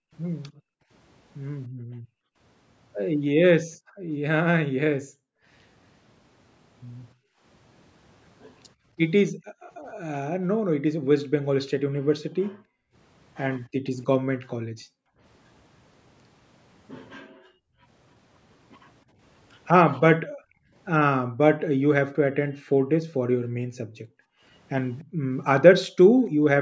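The room background keeps ducking away beneath the speech, sinking by about 40 dB across 0.0 to 5.46 s and 7.14 to 15.19 s, about 33 dB at 17.24 to 17.86 s, then about 40 dB again from 20.2 to 26.44 s. Together the spans add up to roughly 8.7 seconds of near-silence. This is background gated by the echo canceller, clamping the microphone while the far-end loudspeaker played.

From 24.99 to 25.04 s a faint copy of the speech surfaces, about 35 dB below it and trailing by 296 ms. This is likely an echo leak, where the far side's echo canceller let some loudspeaker pickup slip back into the call.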